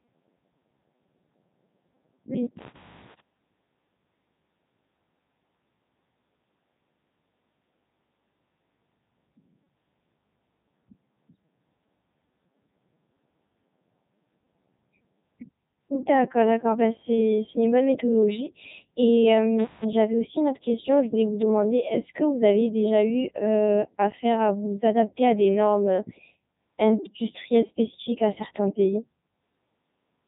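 Throughout, the Codec 2 vocoder rebuilds the speech from sine waves instead of keeping the waveform, leaving it heavily robotic and buzzy, with nothing above 3.8 kHz.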